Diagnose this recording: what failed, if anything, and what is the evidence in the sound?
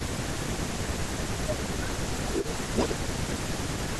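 Speech suppressed in double talk, at the call-processing stage: the speech dips by as much as about 20 dB at 0.0–1.07 s, 1.32–1.98 s, 2.29–2.33 s, 2.66–2.76 s and 2.96 s to the end. The likely cause is an echo canceller ducking its own talker while the far side speaks. Unlike codec dropouts, these are gain cuts rather than glitches.

Echo leak, also in call processing: from 2.03 to 2.58 s and from 2.77 to 2.95 s a copy of the speech returns 0.42 s late, first about 10 dB down and then roughly as loud as the original. This is likely loudspeaker pickup that the far end's canceller left in. The fixed delay separates it from room reverberation, which decays smoothly.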